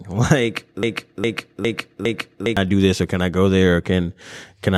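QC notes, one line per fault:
0.83–2.57 s, broken-record loop: a 0.41 s fragment of the speech repeats exactly four times back to back, so the audio stutters in place and whatever belonged in that span never plays. The likely cause is a stalled player or stream resending its last buffered fragment.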